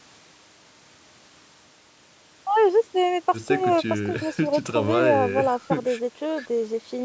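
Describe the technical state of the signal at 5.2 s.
At 5.2 s the speech is intact, with only the expected band limiting of the call microphone processing, which trims the lowest bass and leaves nothing above 8 kHz.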